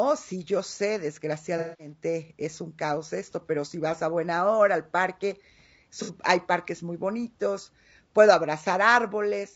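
This is a speech clip with a rough, grainy texture the whole way through: noise fills the gaps between harmonics and the top end sounds thin and a bit synthetic. That's likely low-delay AAC compression, AAC-ELD style, and the damage fits a bitrate somewhere around 32 kbps. There are also two spots of AAC frame loss with concealment, where the decoder patches the holes from the last good spectrum. From 1.58 to 1.92 s you get a smeared, noisy stretch, consistent with several frames dropped in a row. From 6.02 to 6.11 s there's a shorter phasey blip, which fits a couple of missing frames.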